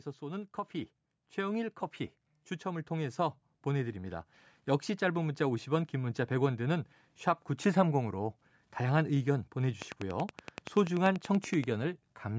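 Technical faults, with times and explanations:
0.19–4.31 s, automatic gain rising: gain climbs about 10 dB as the control answers quiet input, so speech and background swell together; the waveform envelope widens steadily.
9.82–11.65 s, train of clicks: roughly twenty even ticks at 10.5 per second, about 10 dB above the speech, likely from interference; thin vertical spectrogram lines, evenly spaced.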